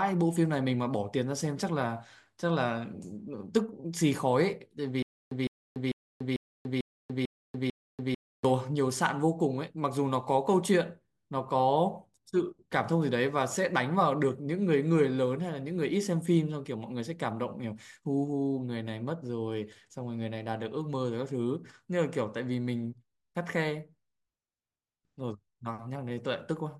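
From 5.03 to 8.45 s, a stutter with silent gaps: a 158 ms burst repeats seven times, separated by 288 ms of digital silence, likely from a stalled stream.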